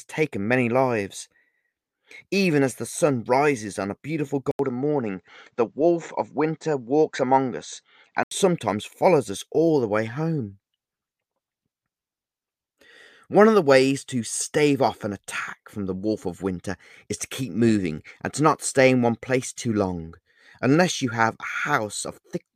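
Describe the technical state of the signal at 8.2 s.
At 8.2 s the input has likely switched to a poorer device. This runs from 4.51 to 8.31 s, starting after "rises on a beautiful". An 80 ms gap marks the switch. Nothing passes above 8.1 kHz, so the sound is duller, over a faint new noise floor.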